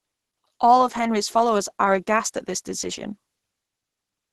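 From start to finish the speech sounds muffled and hoarse, with a rough, grainy edge on voiced sounds and nothing above about 12.1 kHz. This is likely Opus compression, heavily strained: the encoder appears to be in its hybrid speech mode at super-wideband, where a low rate forces narrowed bandwidth and coarse band filling instead of clean detail. The depth of the damage points to a bitrate around 12 kbps.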